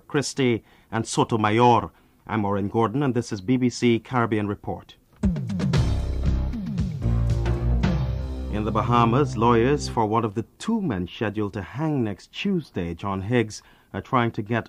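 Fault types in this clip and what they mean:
Wi-Fi interference: A faint, steady ticking, about ten ticks a second, sits well beneath the sound from 8.82 to 10.82 s. The ticks repeat every 102.4 ms, the beacon interval of a Wi-Fi radio. A transmitter close to the audio circuitry sends out those regular beacon bursts, and part of the circuit rectifies the radio-frequency energy, turning each burst into a small audible click that keeps the beacon's timing.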